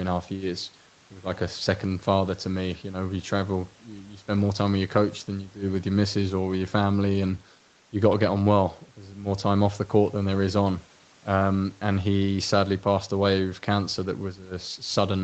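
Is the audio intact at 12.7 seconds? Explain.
Yes, the speech at 12.7 seconds is intact, with no dropout, glitch or other fault at that moment.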